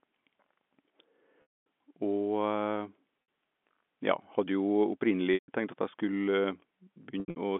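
Packet loss with pitch repetition strikes at 1.42–1.66 s, 3.22–3.28 s, 5.34–5.48 s and 7.20–7.36 s, where the last is scattered. Missing stretches are bridged by a repeated pitch period, so the 60 ms gap holds buzzily, while longer ones fade to silence, unlike the hard clicks of plain dropouts.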